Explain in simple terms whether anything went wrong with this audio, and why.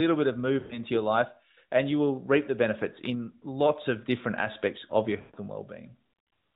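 Yes, two short dropouts. Just after "bit of", from 0.60 to 0.80 s, the speech smears into a drawn-out tone that fades before "your life and you" returns. After "different aspects of your", from 5.20 to 5.39 s, it stretches and dies away the same way. These are lost AMR speech frames. Radio errors corrupted stretches of the mobile signal, so the decoder filled each gap by repeating the last good sound at falling volume.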